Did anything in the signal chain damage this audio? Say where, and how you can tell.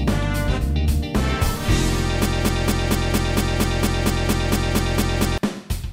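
Yes, there's a broken-record loop from 2.26 s to 5.38 s: a 230 ms fragment repeats exactly, back to back, fourteen times. That's likely a stalled playback or stream buffer resending its last chunk, so whatever belonged in those three seconds is gone.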